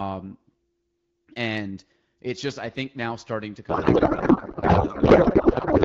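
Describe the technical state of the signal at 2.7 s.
At 2.7 s the speech is intact, coming through the AMR wideband (HD Voice) codec at 12.65 kbit/s with no fault at that moment.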